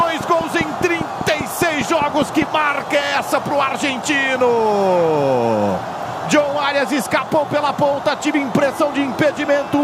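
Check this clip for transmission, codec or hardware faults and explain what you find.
One fault is audible: a train of clicks from the start to about 2.43 s. Around fifteen near-identical pulses arrive at a steady 5 per second, roughly 10 dB above the surrounding sound, likely from electrical interference or a faulty connection. Their regular spacing and matching shape set them apart from random crackle.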